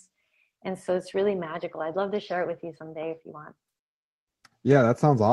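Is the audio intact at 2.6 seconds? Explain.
Yes, the speech at 2.6 s is intact, with no audible fault at that moment.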